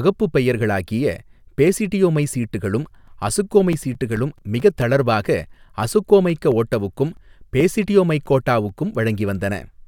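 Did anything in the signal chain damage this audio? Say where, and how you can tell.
Yes, at disc playback. CD scratch ticks repeat at about five per second from 2.64 to 5.25 s and from 6.30 to 8.69 s. Each lasts only a few milliseconds. A blemish passes the laser once per revolution, errors exceed correction, and the player patches the samples.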